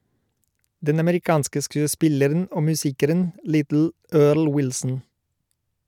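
A speech recording, and nothing is technically wrong with it.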